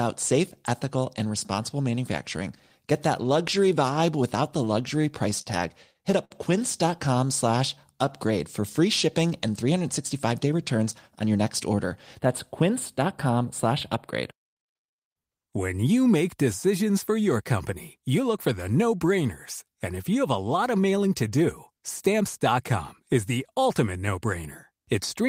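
Right after "luxury vibe without the", from 5.01 to 5.47 s, and again from 5.93 to 6.32 s, the speech hits repeated stalls (stutter): the jitter buffer ran dry five and then four times, and each gap, up to 59 ms, was bridged by holding the last sound. Nothing is lost, but the flow hitches in separate catches rather than stretching evenly.

From 7.15 to 8.06 s a jitter buffer slow-down runs the speech at 93% speed, adding 70 ms by repeating pitch periods. The stretch is smooth and continuous at unchanged pitch, not broken into stalls.

After "for free shipping and", from 10.13 to 11.39 s, a jitter buffer speed-up removes about a tenth of a second, so the speech runs at 107% and sounds hurried. Pitch stays put, which separates it from a sped-up tape.

From 12.19 to 15.29 s, ending just before "when you make decisions", channel delay (comb filtering) makes the sound thin and phasey. One channel lags by a few samples, well under a tenth of a millisecond, and the mono sum cancels energy around 7 kHz. 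The notches stay fixed, so the dullness does not sweep the way a flanger does.

From 21.81 to 22.53 s another jitter buffer speed-up trims a smaller amount, at 105%, giving a briefer, milder rush.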